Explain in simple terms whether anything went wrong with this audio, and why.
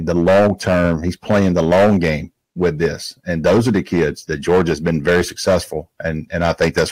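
The speech was louder than one stage could pass, so its peaks were cut flat. This hard clipping adds a harsh crackle to loud moments throughout.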